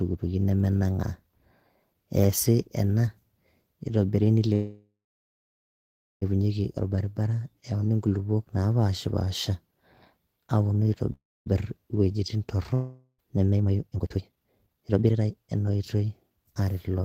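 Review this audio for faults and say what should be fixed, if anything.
Call audio freezes at 4.53–6.24 s and 11.13–11.48 s: a fading buzz, then silence, likely from stalled packets emptying the jitter buffer. The speech resumes intact, delayed by 1.68 s and 0.33 s.

Long network dropout at 12.74–13.20 s: a brief fading fill, then silence, and about 0.72 s of speech never returns, likely from lost packets.

Jitter buffer speed-up from 13.50 to 17.02 s: speech runs at 148% speed at unchanged pitch as the receiver trims roughly 1.5 s of built-up delay.

Fix the network path's stalls and loss, and make the jitter buffer shed excess delay more gradually.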